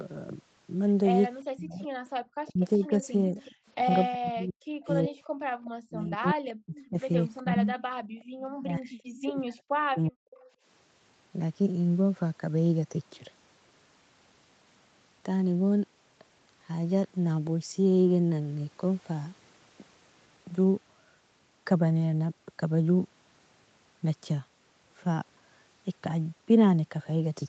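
A speech recording carried over a call path whose band stops at 8 kHz, with echo-control faults in roughly its first eleven seconds. From 1.46 to 10.17 s the voice dips, thins and cuts out in pieces, adding up to roughly four seconds and at worst around 40 dB down. This is likely speech suppressed in double talk, with the echo canceller attenuating the near talker along with the echo. On a waveform it appears as abrupt notches in the envelope, and on a spectrogram as missing upper harmonics or blank columns. An echo leak, likely from an imperfect loudspeaker echo canceller, brings back a faint copy of the speech 372 ms late at 2.62–3.55 s, 5.24–8.24 s and briefly at 10.36–10.45 s. It sits about 25 dB below the speech, about 30 dB in the last instance. A spectrogram shows faint repeated harmonic patterns trailing the originals. The background gated by the echo canceller drops out at 5.51–5.56 s (about 17 dB), 8.02–8.34 s (about 21 dB) and 10.48–10.62 s (about 16 dB). 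These gaps appear as short dark vertical holes in the noise floor on a spectrogram, before the room sound returns.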